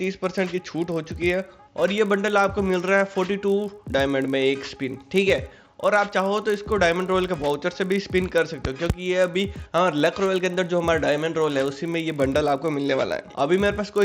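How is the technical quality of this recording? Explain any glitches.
The quality is compromised throughout by one fault. Resampler restarted on every block: each 20 ms block, consistent with a 16 kHz to 48 kHz conversion, gets edge errors, producing a 50 Hz buzz whenever sound plays. On a spectrogram this shows as vertical lines every 20 ms, and the waveform has small glitches at the block edges.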